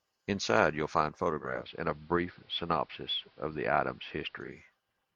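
Digital radio blending to analogue runs from 1.35 s to 4.72 s in this speech clip: the receiver lost its digital stream and cross-faded over 362 ms to the station's AM broadcast, then faded back. During that stretch a faint hiss sits roughly 35 dB under the signal, and the level shifts by about 1 dB. The result is a slightly noisier passage bracketed by two blends.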